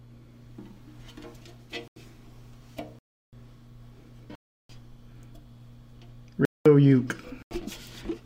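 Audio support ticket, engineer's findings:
Block of digital silence, five hits: 1.88–1.96 s and 7.42–7.51 s (85 ms each), 2.99–3.33 s and 4.35–4.69 s (341 ms each), 6.45–6.66 s (205 ms). Hard cut to silence and back, no fade or concealment fill, unlike a packet-loss dropout. Output buffer likely not filled in time. Four lengths fit 4096- and 16384-sample blocks.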